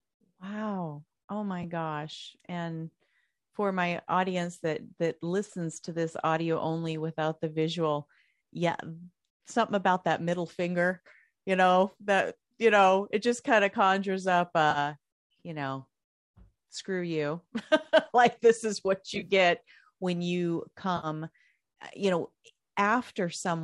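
A brief smeared, phasey blip at 1.63 s, then smeared, noisy patches at 11.91–11.94 s, 14.71–14.78 s, 19.15–19.30 s and 20.97–21.07 s, are AAC frame loss with concealment. The decoder lost about 10 ms, 30 ms, 40 ms, 80 ms and 60 ms of audio and patched each gap from the last good spectrum. At 19.15 s the losses are scattered across about 120 ms, the longest run a few tens of milliseconds. The short gaps suggest 10 ms frames, as in low-delay AAC, likely the codec carrying this speech.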